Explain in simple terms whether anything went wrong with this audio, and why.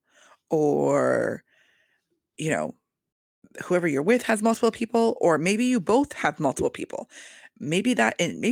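Nothing went wrong with this audio; there is no fault to point to anywhere in it.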